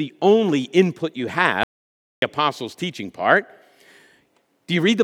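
An audio dropout to silence runs from 1.63 to 2.22 s, cutting off the speech right after "only input you" and resuming mid-flow at "apostles' teaching part". For about 0.59 s the signal falls to silence with no room tone beneath it. The likely cause is that the input path dropped out briefly while the recorder kept writing silence, so whatever was spoken in that stretch is simply gone.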